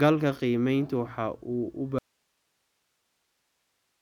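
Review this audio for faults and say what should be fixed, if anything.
The speech cuts out abruptly at 1.99 s and never returns. An audio dropout to a faint residue fills the rest, leaving only hiss about 50 dB below the speech. The likely cause is a lost connection upstream while the recording path stayed live. Secure cables and monitor input levels during recording to prevent it.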